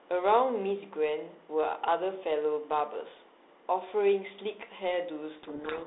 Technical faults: codec payload misread

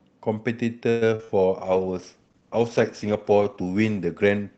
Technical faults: call audio freeze; short concealed packet loss; call bitrate drop

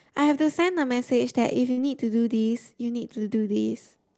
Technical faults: burst of packet loss

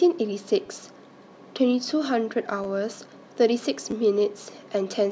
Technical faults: repeated buffer

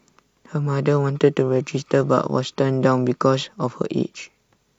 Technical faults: none

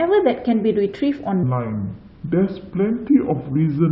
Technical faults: section at the wrong speed

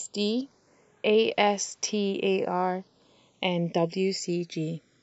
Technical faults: channels drifting apart

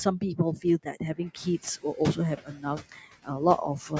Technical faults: noise suppressor artifacts; speech cut by the noise suppressor

